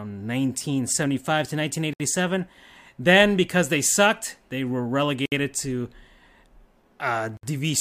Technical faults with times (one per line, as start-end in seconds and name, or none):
1.93-2.00 gap at a join of encoded pieces
5.26-5.32 gap at a join of encoded pieces
7.37-7.43 gap at a join of encoded pieces